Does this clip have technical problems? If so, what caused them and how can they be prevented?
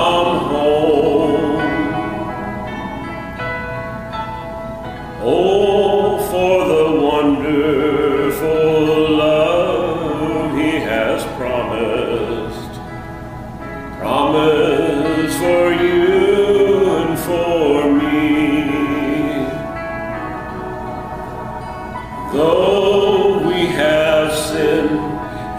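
No, there are no technical problems to report here.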